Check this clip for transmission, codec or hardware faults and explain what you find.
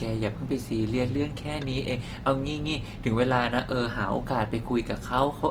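One codec fault runs through the whole clip. Throughout, the speech sounds grainy and rough, likely from Opus compression in music mode, at a rate that fits about 24 kbps. Band energies are kept, but starved bands are refilled with noise. On a spectrogram, this shows as smeared, noisy texture reaching about 20 kHz, with few empty holes.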